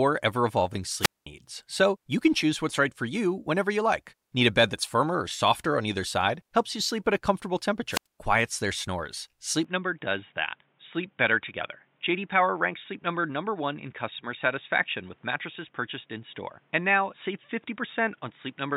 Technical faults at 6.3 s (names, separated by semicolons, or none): none